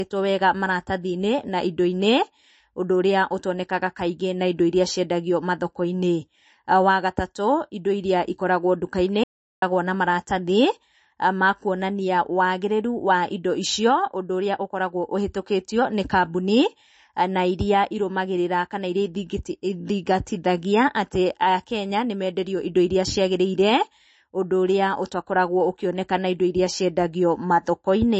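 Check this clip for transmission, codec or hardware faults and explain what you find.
Two faults are audible in this speech clip: lossy-codec damage across its whole length, and one short drop to digital silence.

MP3 compression is plainly audible throughout. Nothing is present above 8.3 kHz, and the speech has a watery, swirling texture with smeared consonant attacks. This is likely a starved MP3 encoder cutting the treble and switching weak frequency lines on and off between frames, which fits a bitrate around 35 kbps.

An audio dropout to silence runs from 9.24 s to 9.62 s, roughly 0.39 s. The sound cuts off mid-flow to silence, with no room tone, then resumes. This is likely a brief loss of the input signal while recording continued writing zeros, so whatever was spoken in that gap is gone.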